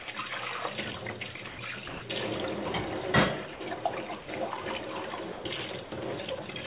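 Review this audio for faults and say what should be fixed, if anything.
Brief gaps filled with steady hiss interrupt the sound at 0.02, 1.48, 1.88, 3.54, 4.22, 5.32 and 5.84 s, each 60 to 140 ms long: likely sound dropped by the voice detector, which misread it as background and sent comfort noise instead. Lowering the detector's sensitivity threshold or disabling voice detection for non-speech audio would prevent this. Above 4 kHz the sound is absent, which points to a narrowband call codec such as G.711.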